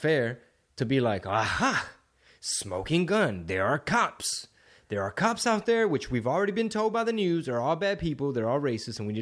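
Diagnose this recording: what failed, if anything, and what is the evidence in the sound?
Nothing failed; no stage in the chain shows trouble.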